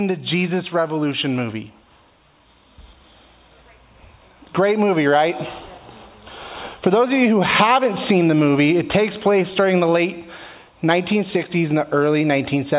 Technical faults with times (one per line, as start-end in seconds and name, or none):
none